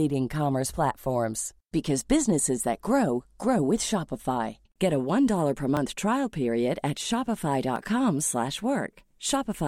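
A speech recording with periodic USB or driver dropouts: from 2.78 s, just after "businesses that," to 8.76 s, a brief slice of audio is skipped about once every 1.0 s, only a few milliseconds each time, producing evenly spaced ticks as a background task stalls the audio path.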